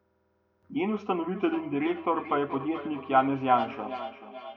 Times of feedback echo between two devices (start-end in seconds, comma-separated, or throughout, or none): 1.35-4.56